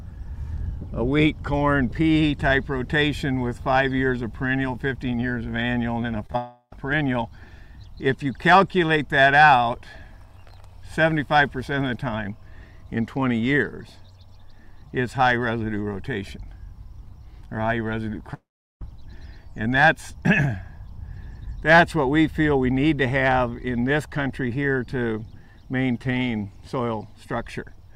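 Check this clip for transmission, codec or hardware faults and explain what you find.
Two kinds of transmission fault are audible: a pair of brief concealed gaps and two longer breaks in the audio.

Short concealed packet loss occurs at 6.26 to 6.30 s and again at 6.32 to 6.35 s. Each time, a few tens of milliseconds of audio failed to arrive in time, and the receiver patched the hole by extending the preceding sound for about 24 ms and then 20 ms before blending back into the real signal. The result is a quick smear or wobble, two in rapid succession.

The long network dropout is the likely cause of the two longer breaks, at 6.38 to 6.73 s and 18.34 to 18.82 s. In each, the audio stops arriving and the last sound is stretched into a fading buzz or hiss. The first break, straight after the short gaps, lasts about 0.34 s and ends with a brief 50 ms of silence. The second lasts about 0.47 s and falls mostly silent for roughly 0.39 s. 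The audio then resumes with that stretch missing.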